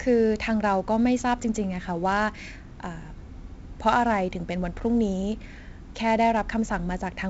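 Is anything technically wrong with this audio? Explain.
Yes. Throughout the speech, heavy 4-bit ADPCM compression codes each sample as a coarse step from a prediction, so gritty hiss rides on loud syllables and attacks distort. A spectrogram shows level-tracking noise and nothing above 7.7 kHz, consistent with 64 kbps.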